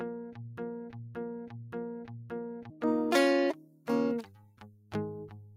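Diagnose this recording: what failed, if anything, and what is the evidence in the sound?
The clip is music, and a speech-tuned noise suppressor in the call-processing stage is acting on it for the whole length. Held notes and decaying tails are treated as background and pulled down while attacks pass, so the level pumps and thins, swinging by around 15 dB. On a waveform the envelope dips between transients instead of sustaining; a spectrogram shows sustained harmonics fading early and patchy gaps in the ambience behind each onset.

From 2.87 s to the end, pre-emphasis is left on. The treble lift used for transmission was never undone at playback, so 10 kHz sits about 11 dB above 1 kHz, which fits a standard 50 µs FM curve with no de-emphasis after it. The sound turns bright, thin and hissy from that point. On a spectrogram the energy above a few kHz brightens abruptly at 2.87 s and tilts upward toward the top band.

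In two spans the suppressor cuts the sound more deeply. From 3.61 to 3.87 s the level drops by up to about 10 dB, and from 4.26 to 4.91 s by up to about 9 dB. The suppressor read these passages as noise, so sustain collapses while any sharp onsets survive. The waveform shows the envelope caving in across each span, and the spectrogram shows darker bands across each span.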